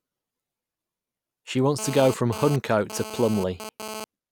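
From 1.79 s to 4.04 s a hard, raspy buzz sits under the speech at about 12 dB below it, pitched near 217 Hz and thick with harmonics that bear no relation to the talker. This is GSM phone buzz. A 2G handset nearby was transmitting in bursts 216.7 times per second, and the audio circuitry rectified those radio pulses into sound. Because the phone was moving data rather than holding a call, the buzz comes and goes.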